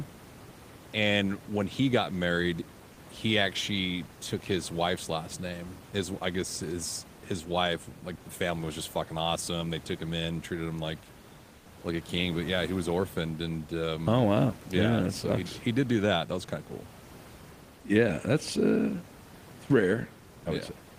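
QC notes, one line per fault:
11.57 to 11.65 s, comfort noise in place of the background: for about 80 ms the real room noise, which sits about 23 dB below the speech, gives way to a flat, textureless hiss about 3 dB quieter that lacks the room's detail. The likely cause is discontinuous transmission, consistent with Opus DTX: the sender's voice detector judged the gap silent and stopped sending, so the receiver filled it with synthetic noise shaped roughly like the background.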